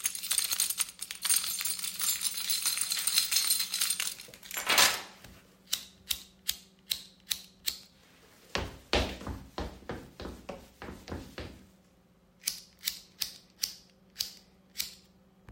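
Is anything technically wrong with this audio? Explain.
No, nothing technically wrong can be heard in this recording of sounds.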